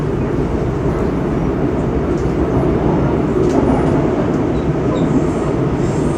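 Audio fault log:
No faults were heard in this recording of sounds. Nothing in it calls for an entry in this log.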